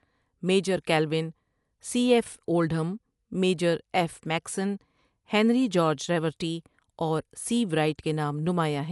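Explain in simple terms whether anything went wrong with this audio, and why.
The speech was most likely squeezed through Dolby Digital compression at a low data rate for the whole clip. To save space, the encoder threw away everything above about 11.4 kHz and skipped the finer detail in many frequency bands, which the decoder then papered over with filler noise. That is why the speech sounds dull and muffled from start to finish, with a rough, fluttering grain clinging to the voice.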